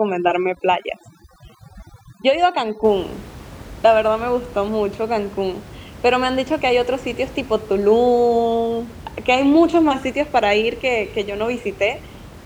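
Speech opens with overdone noise removal from 0.0 to 2.84 s. A noise reducer set too aggressively pulls individual frequency bands down whenever they sit close to its noise estimate, so the gaps drop to near silence sprinkled with twinkling specks while the voice's quieter components vanish with them. A noise gate would instead mute everything at once. After 2.84 s the room noise sits about 19 dB below the speech.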